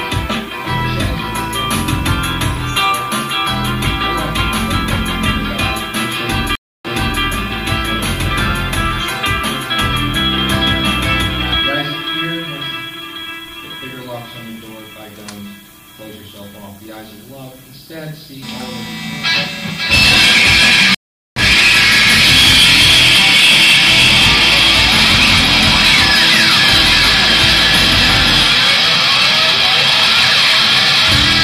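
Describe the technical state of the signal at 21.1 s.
A stream reconnect spans 20.95 to 21.41 s. The connection dropped, leaving about 0.42 s of silence. Playback then restarts roughly 0.4 s further along.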